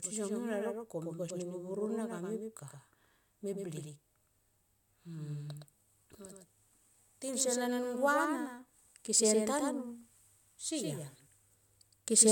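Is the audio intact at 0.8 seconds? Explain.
No. At 0.8 seconds, as across the whole clip, there is a doubled audio track, likely a second capture through a slower path. A full-band copy of the speech trails about a tenth of a second behind, roughly 5 dB quieter, giving a dry, uncoloured echo.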